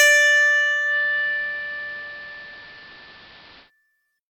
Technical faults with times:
0.84-3.71 digital radio blending to analogue

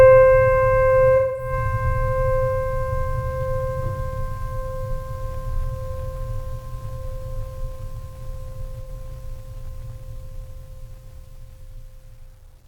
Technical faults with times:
1.16-1.52 AAC frame loss with concealment
8.84-8.90 AAC frame loss with concealment

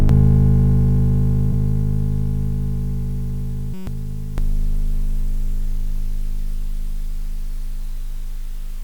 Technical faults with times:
0.00-4.38 channel delay (doubling)
1.52 lost LE Audio frames
3.74-3.87 system hang loop

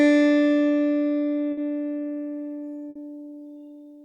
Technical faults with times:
1.51-1.60 burst of packet loss
2.89-2.98 burst of packet loss

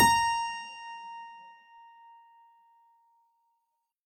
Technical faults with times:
none

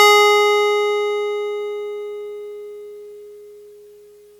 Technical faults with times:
none

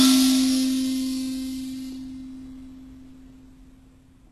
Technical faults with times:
0.00-4.32 HE-AAC compression

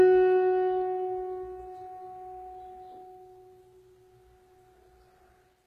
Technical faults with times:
0.00-5.67 HE-AAC compression

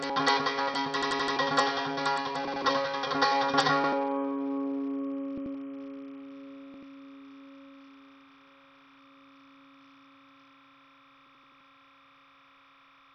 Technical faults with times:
0.00-13.15 timecode bleed
0.00-13.15 Bluetooth SBC compression
1.02-1.37 repeated buffer
2.47-2.65 repeated buffer
3.84-3.93 repeated buffer
5.38-5.55 repeated buffer
6.74-6.83 repeated buffer
11.26-11.61 repeated buffer

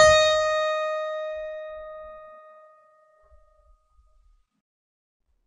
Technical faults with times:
0.00-5.46 transcoding between lossy codecs

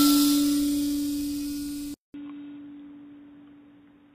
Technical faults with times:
0.00-4.14 low-delay AAC compression
1.94-4.14 input switched to a poorer device

